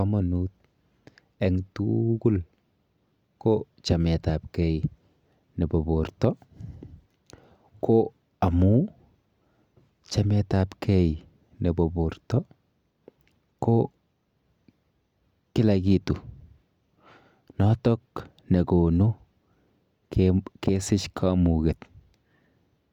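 Listening through the speech recording, nothing stood out as a technical problem.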